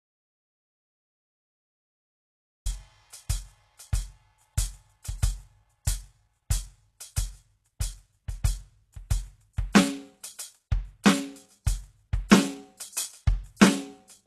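The music opens in complete silence, with no room tone at all. The gap is already under way when the clip starts and runs to 2.66 s. That points to an audio dropout to silence, most likely a lost input while the recorder kept writing silence. Whatever was playing then is simply gone. The rest of the clip carries audible HE-AAC compression, likely at a very low bitrate, with damage that is plainly audible. Nothing is present above 12.3 kHz. The treble that remains sounds synthetic, because it is rebuilt by copying lower bands upward. Its harmonics do not line up with the real ones, so high content turns gritty and metallic. Pre-echo appears before several sharp attacks: 5.85 s, 12.77 s, 12.93 s and 13.56 s. The smear spans 20 ms, 24 ms, 40 ms and 33 ms respectively. Each time, a brief hiss arrives just ahead of the hit, and the attack sounds softened. This happens because the codec spreads its quantisation noise across a whole block, so noise meant for the loud onset leaks into the quiet moment before it.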